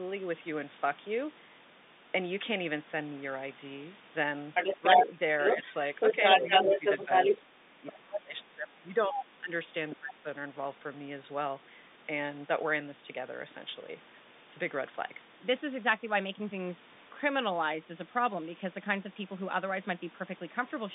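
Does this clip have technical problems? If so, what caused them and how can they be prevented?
Yes. A second talker bleeds into the recording from 4.54 to 7.41 s, roughly 10 dB louder than the main speech, then returns more faintly, a few dB below it, at 7.90 to 8.19 s and 9.17 to 9.25 s. This is likely other side's voice leaking through: loudspeaker playback reaching the microphone and not fully removed by the echo canceller. Using a headset, or an echo canceller with better adaptation, would prevent it.

The main speech dips and breaks up at 4.79 to 5.06, 5.57 to 5.66, 6.13 to 7.09, 7.42 to 9.51 and 9.92 to 10.26 s, falling by up to around 20 dB. This is likely speech suppressed in double talk: with both sides active, the canceller attenuated everything. Better double-talk detection in the echo canceller would keep the near-end speech intact.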